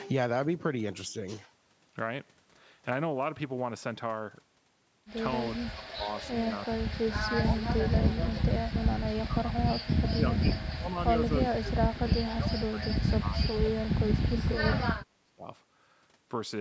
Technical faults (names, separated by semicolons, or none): speech suppressed in double talk